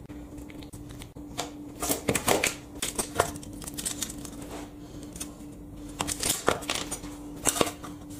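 At 1.88 to 1.91 s, compressed frames are skipped. About three frames of 46.4 ms, roughly 150 ms of audio, never play. The sound jumps ahead. At 2.95 to 2.98 s, about two frames vanish the same way.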